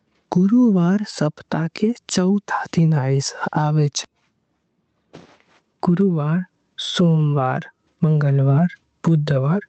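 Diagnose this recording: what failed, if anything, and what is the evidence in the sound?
The input gain is likely set far too high, with a fast limiter in the processing chain clamping every loud speech peak. Throughout, the gain ducks by roughly 15 dB under each loud syllable, leaving the speech squashed. This is gain pumping, heard through a call path whose top ends near 8 kHz.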